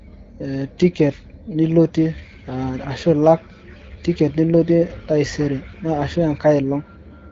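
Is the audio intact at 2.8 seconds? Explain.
Yes, at 2.8 seconds the speech is intact, carried cleanly through the AMR wideband (HD Voice) codec path with no dropout, glitch or other fault at that moment.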